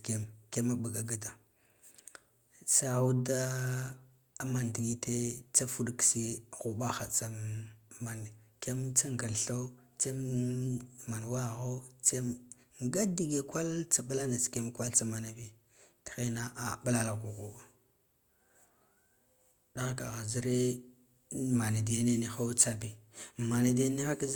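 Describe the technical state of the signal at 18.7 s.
At 18.7 s the signal is intact, with no dropout, distortion, clipping or other technical fault audible at that moment.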